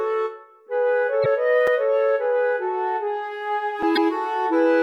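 At 1.22 to 1.26 s and again at 3.93 to 3.98 s, damaged data in a compressed stream produces a brief disturbance about 44 ms long. Corrupted frames are misread or rejected, and the decoder loses sync and hunts for the next valid frame header. At 1.67 s and 3.83 s, a block of digital silence cuts in as a tick or dip. Roughly 5 ms of samples drop out with no fade, which points to the output buffer not being filled in time.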